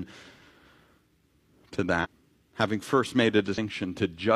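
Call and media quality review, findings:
Compressed frames skipped, 2.0–2.06 s: speech jumps forward, roughly 0.7 s of audio missing, consistent with about fifteen 46.4 ms frames dropped at the decoder. No silence gap at the join.

Same at 3.53–3.58 s: shorter jump, about 150 ms lost. Audio jumps ahead at the seam, unlike the gap of a dropout.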